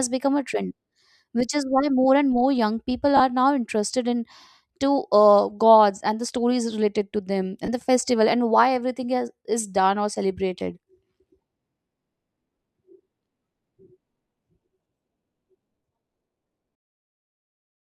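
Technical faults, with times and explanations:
3.17–3.20 s, 7.66–7.69 s and 10.60 s, lost LE Audio frames: 30, 20 and 10 ms gaps are filled by the decoder repeating the last spectrum with scrambled signs, giving a brief noisy smear rather than a silent dropout or click.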